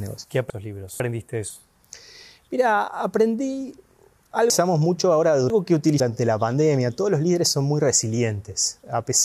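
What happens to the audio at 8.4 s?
Nothing goes wrong at 8.4 s: the audio plays through that moment intact, with no dropout, click or distortion.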